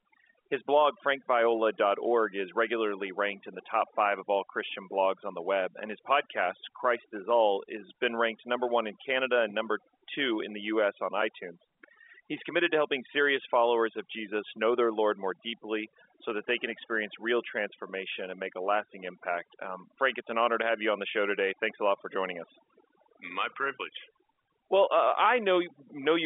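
Overdone noise removal runs through the whole of this speech recording, from start to finish. A noise reducer set far too aggressively is switching off individual frequency bands whenever they dip close to its noise estimate, so the background noise collapses into near silence scattered with twinkling specks, and the softer parts of the voice are cut away along with it. The telephone-band G.711 A-law path at 64 kbps adds at most a faint grain of its own.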